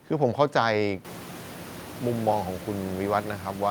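There are no technical faults to describe in this speech clip; the room noise that rises about a second in, staying about 16 dB below the speech, belongs to the recording itself.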